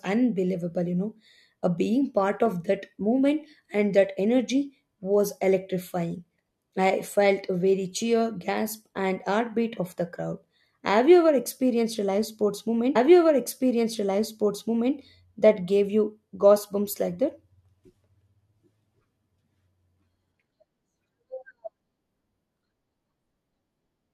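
Speech recording with a stream segment repeated. Right after the words "a live sports", at about 12.95 s, playback jumps back and about 2.0 s of the programme plays again, ending around 14.95 s, with a small blip at the jump. The player fetched or queued the same segment twice, so the duplicated stretch is an exact copy that is added to the running time. A dropout or skipped segment would lose material instead, and a stutter would repeat only a tiny fragment rather than a full two seconds.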